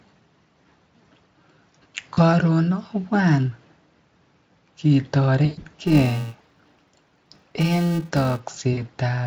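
A short speech clip, carried over what sounds like a fairly high-quality Speex setting, with two separate problems. VoIP packet loss concealed by the speech codec hits at 2.13 s, 5.45 to 5.65 s and 8.73 s. The decoder fills the gaps by stretching the last bit of voice into a fading buzzy smear, worst in the middle burst, where about 140 ms went missing in runs up to 120 ms. From 5.82 to 8.40 s there's a filter restarted on every block: a steady 345 Hz buzz that tracks the speech level, which fits a 128-sample block.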